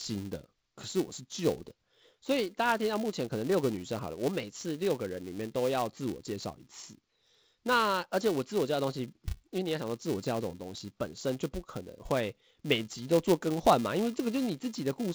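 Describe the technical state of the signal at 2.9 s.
At 2.9 s, as across the whole clip, the filter is restarted on every block. Its state is wiped and each block starts from silence, leaving a small transient at every boundary. These repeat at 375 Hz, which fits 128-sample blocks, and give a buzz that rises and falls with the speech level.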